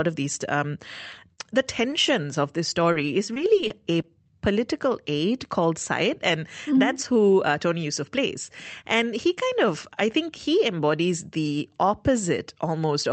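Just after "of these um", two short concealed packet losses fall back to back, from 1.11 to 1.15 s and from 1.15 to 1.19 s. Each is a 20 ms hole that the receiver filled by extending the preceding sound rather than leaving silence. Together they make a single smeared stretch of about 40 ms, heard as a brief wobble before the real signal blends back in.

From 2.92 to 4.06 s, between "of this" and "political aide called", scattered short gaps appear. About four separate packets went missing, none much longer than 20 ms, adding up to 80 ms of lost audio. Concealment patched each hole by continuing the previous sound, so only a small share of the span, around 7 percent, is synthetic. It comes across as a few isolated ticks and hiccups on otherwise continuous audio. All of this sits on top of the Opus call path, whose upper limit is about 8 kHz.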